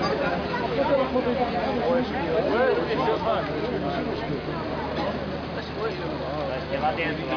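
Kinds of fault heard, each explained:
No kinds of fault are heard in this clip.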